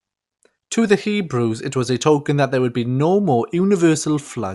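Throughout the speech, the sound is dull, with nothing above 11.5 kHz. A rough, fluttering noise clings to tonal parts. The likely cause is Dolby Digital compression at a low rate, fitting 64 kbps. Lines left without bits get filled with noise.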